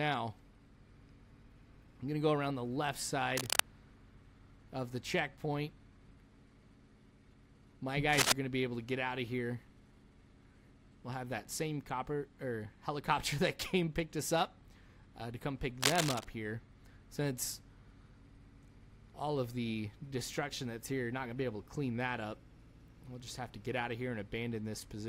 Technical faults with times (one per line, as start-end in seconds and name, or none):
3.36-3.60 cable scratch noise
8.13-8.32 cable scratch noise
15.81-16.25 cable scratch noise